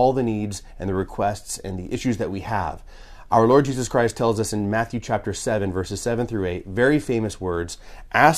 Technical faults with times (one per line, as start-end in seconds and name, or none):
none